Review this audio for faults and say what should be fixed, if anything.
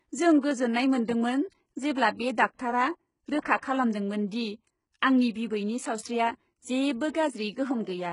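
The encoder was likely HE-AAC running at a very low rate, consistent with roughly 12 kbps. It coded only the lower spectrum and synthesized the treble by copying lower bands upward under a coarse envelope. Throughout the speech, from start to end, the upper band sounds artificial: s sounds turn gritty and metallic, the rebuilt harmonics don't line up with the real ones, and nothing survives above 11.1 kHz. To prevent it, encode at a higher bitrate with plain AAC-LC or a lossless format, so the treble is coded directly rather than reconstructed.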